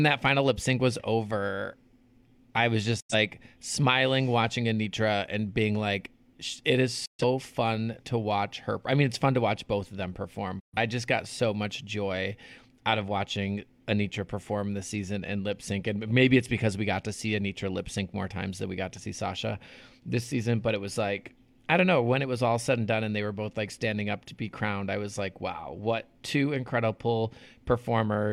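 Digital broadcast dropout mutes the speech three times: after "I was" at 3.00 to 3.14 s, after "being like it is" at 7.05 to 7.24 s, and after "both of them perform" at 10.60 to 10.78 s. Each gap fades out in about 8 ms to true silence, which points to two or three failed frames. Unlike packet-loss concealment, nothing is smeared or repeated.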